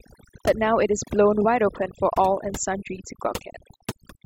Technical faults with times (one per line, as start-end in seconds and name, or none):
0.00-4.26 overdone noise removal